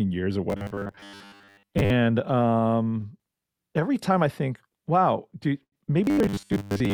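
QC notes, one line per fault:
0.50–1.90 s, robotic sound from repeated short buffers: after "years or", the speech becomes a rigid metallic buzz near 100 Hz, likely from repeating a 10 ms buffer while most real audio is skipped.
6.04–6.93 s, robotic sound from repeated short buffers: after "I think wow do", the same fixed 100 Hz buzz appears, likely from 10 ms repeats replacing most of the incoming audio.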